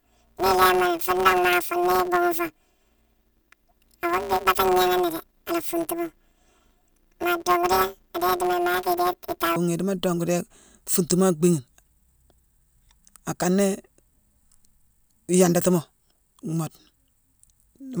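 From 0.0 to 9.56 s the speech takes on a robotic buzz near 172 Hz with no clear octave shift. This is planar audio read as interleaved: each 5.8 ms block, fitting a 256-sample block, plays its left then right halves at double speed.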